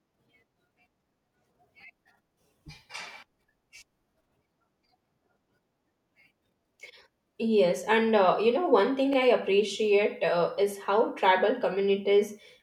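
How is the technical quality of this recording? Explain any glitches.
Two brief stutters mar the speech. Overlapping chunks, at 4.11–4.13 s and at 9.13–9.16 s between "you know one thing" and "I appreciate uh is": each 5-second chunk began early, so about 21 ms replays as a click.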